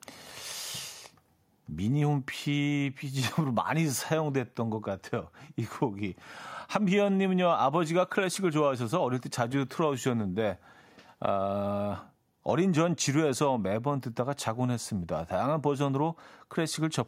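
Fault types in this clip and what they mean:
No fault types are present in this clip.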